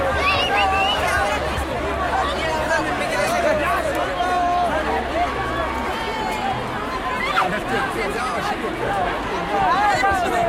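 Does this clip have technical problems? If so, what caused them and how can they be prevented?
No, this clip has no technical problems, so there is nothing to prevent.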